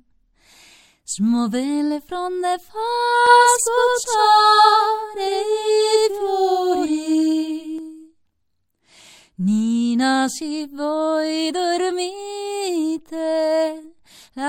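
From 3.27 s to 7.79 s the clip carries a doubled audio track: a second, full-band copy of the same sound trails the original by around a tenth of a second, at roughly equal level. It adds no decay or room colour, only a crisp slapback that repeats every onset, and it switches in and out abruptly at both ends. The likely cause is a slower second capture path, or an edit holding two copies out of step.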